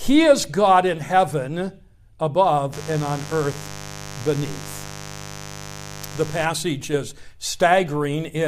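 From 2.73 to 6.45 s there's mains buzz on the speech: a steady, raspy 50 Hz hum, sitting roughly 15 dB under the speech. Switching spikes from something like a dimmer or a bad shield are leaking in, twice per mains cycle, spraying harmonics well up into the kilohertz range.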